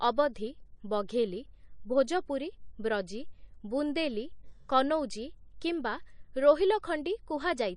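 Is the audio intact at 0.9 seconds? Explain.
No. At 0.9 s, as throughout the speech, there is a watery, swirling quality with chirpy s sounds, likely from MP3 compression at a rate that fits about 40 kbps. Weak frequency lines flicker on and off between frames, which a simple low-pass filter would not cause.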